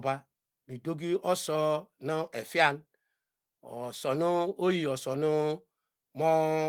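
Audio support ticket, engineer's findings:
No faults found in the speech recording; nothing to attribute to any component.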